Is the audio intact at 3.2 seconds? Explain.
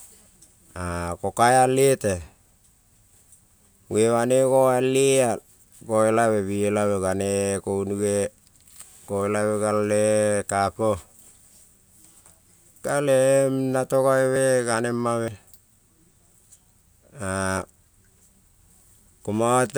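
Yes, the speech at 3.2 seconds plays through without any dropout, click, distortion or other audible fault.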